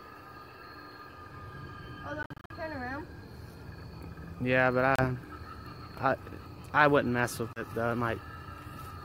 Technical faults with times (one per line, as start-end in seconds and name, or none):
2.23-2.51 Bluetooth dropout
4.96-5.04 Bluetooth dropout
7.53-7.61 Bluetooth dropout